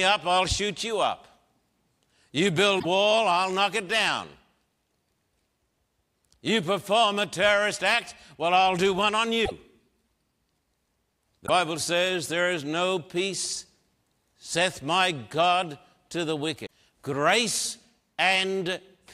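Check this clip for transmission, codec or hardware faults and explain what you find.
There's one kind of fault here, four times over in the speech. At 2.78–2.85 s, 9.45–9.52 s, 11.46–11.50 s and 16.65–16.71 s the audio skips ahead and sputters into a brief chirp, burst of noise or short hole. That's likely a broken MP3 bit reservoir: frames went missing, so the next ones reached back for borrowed bits and decoded garbage. Each glitch spans roughly one and a half to three frames, which fits 26.1 ms MP3 frames.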